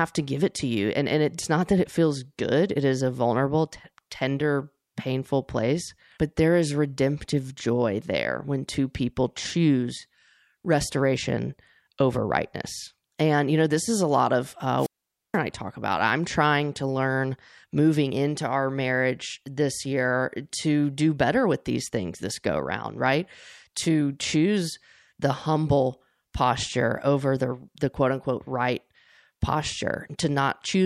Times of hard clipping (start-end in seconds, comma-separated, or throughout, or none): none